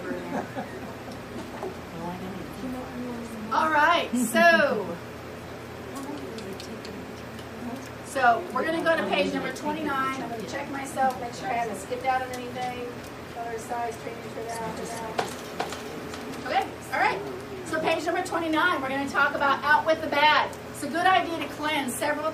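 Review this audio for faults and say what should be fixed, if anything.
From 14.63 to 16.63 s there is a doubled audio track: a second full-band copy trails about 400 ms behind, roughly 5 dB quieter, with no decay or room colouring, and it starts and stops abruptly. The likely cause is the signal being captured twice, once through a slower path. To prevent it, route each source through a single capture or monitoring path and mute any duplicate return feeding the recording.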